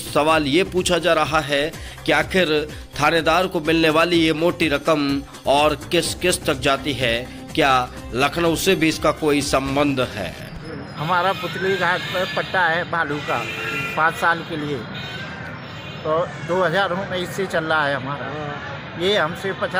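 Nothing technically wrong turns up anywhere in this audio, so there's really no fault to point to here.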